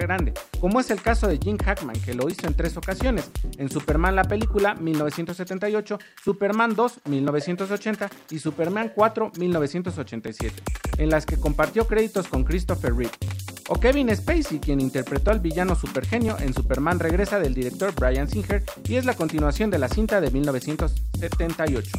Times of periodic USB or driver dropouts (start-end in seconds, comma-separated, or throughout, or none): 0.31-21.27